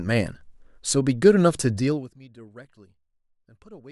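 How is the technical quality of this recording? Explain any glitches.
There is one glitch, a stepped fade. From 1.77 to 2.19 s, zipper noise appears. The level falls roughly 25 dB in about 200 unsmoothed steps a second. Each step clicks, giving a fine ticking buzz.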